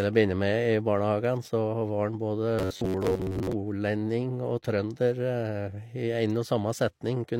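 From 2.59 s to 3.53 s the speech takes on a robotic sound from repeated short buffers: a rigid, metallic buzz at 93.8 Hz that tracks the original speech only roughly. The likely cause is audio arriving too seldom, so the playback path fills the gaps by looping the most recent buffer, which fits a buffer of about 10.7 ms. Roughly half of the material in this span is repetition, with the corresponding real audio skipped.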